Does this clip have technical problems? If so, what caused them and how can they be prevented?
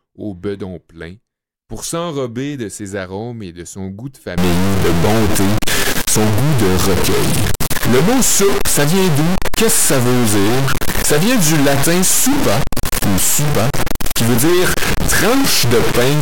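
Yes. From 4.38 s onward, harsh, buzzy distortion appears and pauses fill with noise. The likely cause is a stuck bit whose weight is about -10 dBFS. Prevent it by checking converter wiring and data lines with a bit-pattern test before recording.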